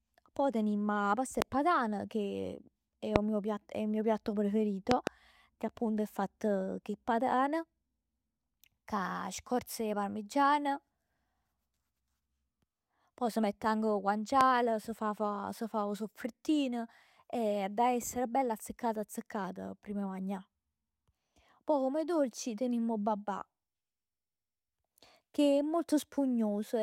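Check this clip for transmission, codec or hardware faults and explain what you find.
The clip has a hardware fault: four loud pops in the speech, at 1.42 to 1.44 s, 3.16 to 3.18 s, 4.91 to 5.09 s (a double pop) and 14.41 to 14.43 s. Each is a sharp thump roughly 20 to 25 dB above the speech. The likely cause is a voltage step from a plug, switch, static or driver glitch. The speech continues underneath, which distinguishes these pops from dropouts or clipping.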